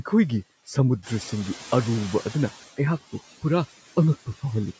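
Noise suppressor artifacts run through the whole clip. The suppressor cuts steady noise by about 14 dB per band, so the noise sinks between the words and rises under them.

From 1.02 to 2.71 s, the noise suppressor is catching up. The room noise jumps by about 11 dB near 1 s and comes through with less reduction at first. It then sinks by about 13 dB over 1.69 s as the estimate adapts.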